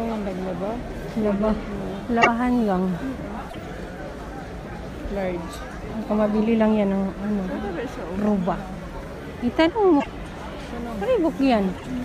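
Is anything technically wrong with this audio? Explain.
Yes. At 2.21–2.28 s, 3.49–3.56 s, 9.99–10.06 s and 11.77–11.84 s the sound skips ahead with a brief chirp, noise burst or short hole, each about 70 ms. This is likely a broken MP3 bit reservoir: after missing frames, the next ones fetch data from the wrong place, spanning roughly three 26.1 ms frames.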